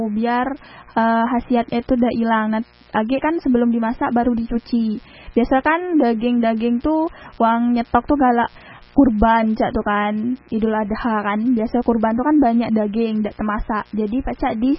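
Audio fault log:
throughout mains buzz. A steady, raspy buzz sits under the speech for the whole clip, roughly 30 dB below it. It is built on 60 Hz and its harmonics. Sharp switching spikes, arriving twice per mains cycle, leak into the signal path. Such narrow spikes carry energy far above the fundamental. So the hum becomes a rough, edgy buzz and not a smooth low tone. It never lets up between phrases.
throughout MP3 compression. The speech sounds dull and boxed in, with nothing above 5.6 kHz. The damage is heavy. Sibilance loses its air, and the sound takes on a watery, swirling quality. This is likely MP3 coding at a very low bitrate, which fits roughly 16 kbps. Starved of bits, the encoder cuts all treble above a fixed point. It also drops quiet frequency lines, which flicker in and out between frames and cause the swirl.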